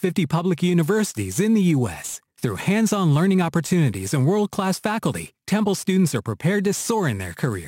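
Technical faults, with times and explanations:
Throughout, crude rate conversion: the audio was resampled by simply taking the nearest existing sample, with no filtering. The mismatch fits a change from 48 kHz to 44.1 kHz, a ratio of 147 to 160, so samples are skipped in a fixed repeating pattern. That timing error creates shifted, inharmonic copies of the speech, sitting roughly 25 dB below it, heard as a gritty fizz that follows louder and brighter syllables.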